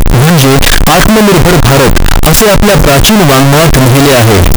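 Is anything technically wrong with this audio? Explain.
Yes. Throughout the whole clip, the audio was likely stored as 32-bit floating-point samples but read back as 32-bit integers, a float read as integer fault. Each sample's sign and exponent bits then decide its value, so the waveform turns almost square and sits at an almost fixed, high level no matter how quiet the original was. The result is extremely loud and harsh, with background noise as loud as the speech, yet the pitch of the speech can still be followed.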